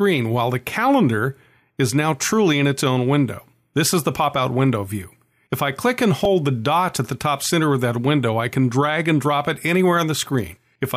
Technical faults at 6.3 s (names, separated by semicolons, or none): repeated buffer